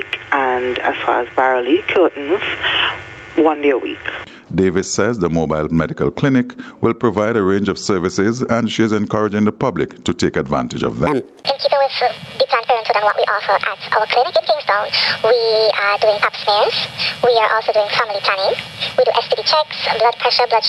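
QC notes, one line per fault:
Throughout, gain pumping: the level swings by roughly 15 dB, pulled down under each loud moment, likely a hot input slamming a fast limiter.
11.07 to 20.68 s, section at the wrong speed: it plays 1.58 times fast, so pitch rises about seven semitones and it sounds rushed, likely from playback against the wrong clock.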